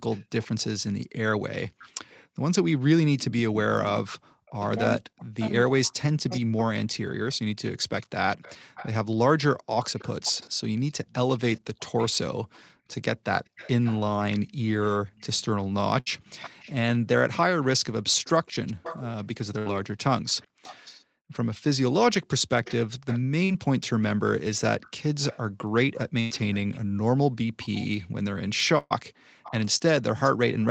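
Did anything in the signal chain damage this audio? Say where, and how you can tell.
Yes. A buffer stage mismatches block sizes, with truncation. A steady buzz near 47 Hz runs throughout. That fits 1024-sample blocks, each losing its tail.

Echo leak comes from call processing. A faint delayed copy trails the speech by 0.42 to 0.46 s, at about 20 to 30 dB down. It is heard at 0.11–2.26, 4.47–4.68, 6.29–21.04 and 22.63–30.71 s. The likely cause is an echo canceller leaving residue.

Speech is suppressed in double talk between 3.00 and 6.73 s. Speech dips by as much as about 40 dB, over roughly three seconds. The canceller likely ducks its own talker along with the loudspeaker echo.

Bursts of packet loss come from the network. At 16.00–16.08, 19.58–19.73, 26.20–26.32 and 28.78–28.92 s, 60 to 120 ms are missing. A held, fading sound covers each gap.

Short concealed packet loss is also network damage. 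Brief smears occur at 23.44–23.51 s and 29.78–29.82 s. Around 20 to 40 ms were missing.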